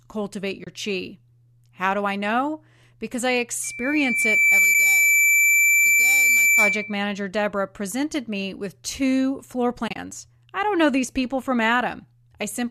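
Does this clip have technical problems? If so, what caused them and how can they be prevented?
Yes. The speech drops into brief, soft-edged silences at 0.64 to 0.67 s, at 4.74 s, and across 9.88 to 9.98 s, where several short gaps cluster, the longest about 30 ms. This is AAC frame loss with muting. Lost frames were decoded as silence, and the overlapping windows faded the sound out and back in. Gap lengths in 10 ms steps point to low-delay frames of that size. Sending the stream over a link with packet redundancy or forward error correction, and using loss concealment that fills gaps rather than muting them, would prevent it.

From 3.64 to 7.00 s a steady tone at 2.3 kHz swells over roughly a second into a squeal sitting about 5 dB above the speech. This is loudspeaker feedback squeal. The microphone was picking up its own loudspeaker, and at 2.3 kHz the loop gain passed unity, so the tone kept building on itself. 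Keeping the microphone away from the loudspeaker, using headphones, or lowering monitor gain or notching that frequency would prevent it.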